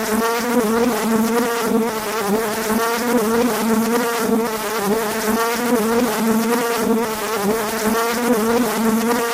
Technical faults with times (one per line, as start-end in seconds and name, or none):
0.00-9.33 timecode bleed